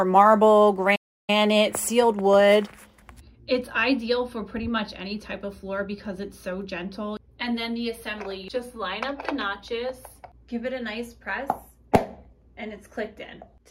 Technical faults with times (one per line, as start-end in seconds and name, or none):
0.95-1.30 playback stall